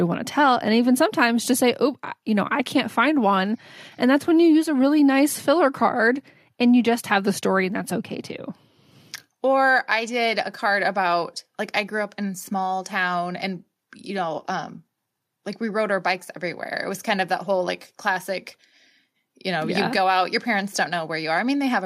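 No technical faults can be heard anywhere in this speech recording.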